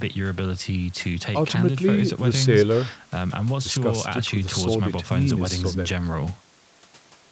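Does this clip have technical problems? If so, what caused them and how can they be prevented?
No, nothing in this recording points to a technical problem.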